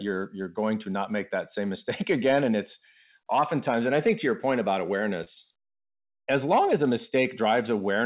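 Around 5.24 to 5.29 s there's a short concealed packet loss: roughly 20 ms of the speech never made it to the decoder in time, so the receiver papered over the gap by extending the sound it had just played, about 25 ms of made-up audio, then faded back into the real signal. You hear it as a quick smear or little wobble, and a brief consonant there could get swallowed. The narrowband call path, with nothing above 4 kHz, fits a G.711-style codec.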